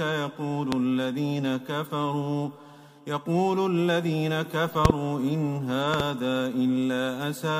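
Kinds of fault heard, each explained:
Loud pop: sharp, loud pops about 20 to 25 dB above the sound, one at 0.72 s and quick doubled pops at 4.85 to 4.92 s and 5.94 to 6.02 s, with the sound carrying on underneath. The likely cause is sudden voltage pulses entering the signal.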